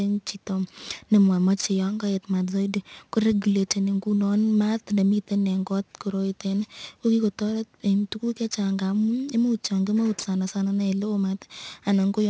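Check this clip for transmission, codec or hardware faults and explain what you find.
One fault runs through the whole recording. Aliasing, throughout: the sample rate was lowered, which fits a drop to 16 kHz, without an anti-aliasing filter, so content above 8 kHz folds back down as false tones, roughly 25 dB under the speech, making sibilants gritty and metallic.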